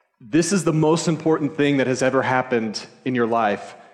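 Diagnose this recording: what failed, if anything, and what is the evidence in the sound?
The failure sits at the codec stage, in a Bluetooth SBC bit pool drop. From 1.72 s to the end, the top of the spectrum goes dull and a gritty, granular noise rides under the sound. That fits the encoder's bit pool falling from 28 to 12, near 96 kbps, on a congested link. Starved of bits, the highest sub-bands get little or nothing and the remaining bands are coarsely quantised, which produces the grit.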